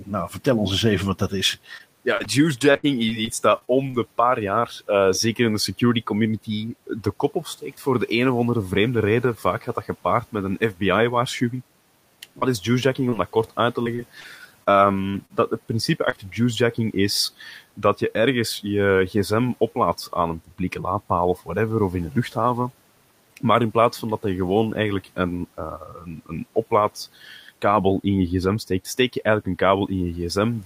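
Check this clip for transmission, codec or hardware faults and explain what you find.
Three kinds of fault are present: a clipped onset from the noise suppressor, two stretches of repeated packet loss, and three short concealed packet losses.

Speech cut by the noise suppressor, 0.00–0.09 s: the very start of the speech is pulled down by about 11 dB for roughly a tenth of a second. Before the suppressor had judged the opening sound to be speech, it treated it as background and attenuated it, so the first sound comes in swallowed and faint. Nothing is replaced or smeared. The level simply dips and then recovers, which separates it from packet loss. The room noise, about 28 dB below the speech, is a recording condition rather than a fault.

Repeated packet loss (robotic sound), 1.77–3.95 s and 13.84–15.31 s: in each stretch, packets arrive late or not at all in quick succession, and the receiver bridges each hole by extending the last sound. 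In both stretches about 13% of the span is patched, with gaps up to 67 ms in the first and up to 41 ms in the second. Because the holes come close together, the audio turns choppy, with pieces missing. The steady repetition over a whole stretch is what separates this from an isolated loss.

Short concealed packet loss at 12.39–12.43 s, 13.09–13.14 s and 16.09–16.14 s: in each case about 20 ms of audio never reached the decoder. The gap was filled by continuing the preceding sound, from its pitch if voiced and as shaped noise if not, and then faded back into the real signal. Each one is heard as a single brief smear or wobble, possibly with a short consonant lost. Unlike the robotic stretches, these are isolated events, and unlike suppression, the sound is synthesised rather than turned down.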